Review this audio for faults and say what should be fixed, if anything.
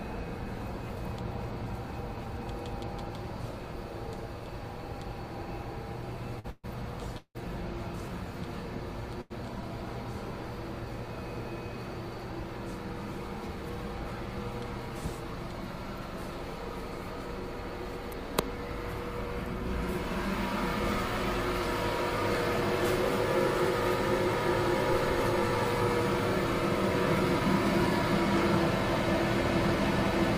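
Short stalls from a late packet at 6.39–6.46 s and 9.21–9.32 s hold the last sound for 47 and 90 ms, a brief stretch rather than any silence.

Call audio freezes at 6.50–6.66 s and 7.18–7.42 s, likely from packets held up in transit, continue as a fading buzz that drops to 30 and 80 ms of silence, unlike the shorter stalls.

A jitter buffer speed-up at 13.48–14.12 s trims pitch-period slices, roughly 50 ms in all, so the sound runs about 8% faster at unchanged pitch.

A larger or more adaptive jitter buffer, together with steadier network delivery, would prevent the stalls, the freezes and the catch-up speed-up.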